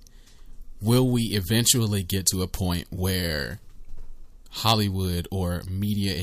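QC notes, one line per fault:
Nothing to flag on this speech recording; I listened all the way and heard no technical faults.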